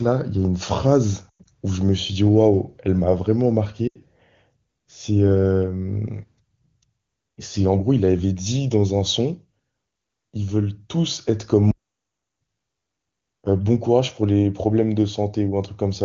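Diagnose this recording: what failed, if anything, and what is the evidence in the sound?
Lost AMR speech frames, at 1.30 to 1.46 s and again at 3.88 to 3.98 s, on the radio link before the decoder. In the first, the speech warbles and smears over about 160 ms, with the longest stretch of concealment about 100 ms, which fits six scattered 20 ms frames. The second is four lost frames, 80 ms in all. The decoder fills each gap by repeating the last good pitch and vocal tract settings at falling gain. Because this is wideband coding, the repeated sound fades quickly, and the speech comes back briefly thin.

Playback stall, from 11.71 to 12.42 s, at the playback stage. The speech stops mid-flow for about 0.7 s of dead silence and then resumes. There is no smearing or fade into the gap, and the wideband speech around it stays clean. That points away from the codec and the network. The likely cause is the player's buffer running empty or its output thread being blocked until it recovered.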